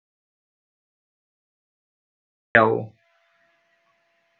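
From the very start until 2.55 s there's dead silence, an audio dropout to silence with no room tone, likely a lost input before the speech comes in.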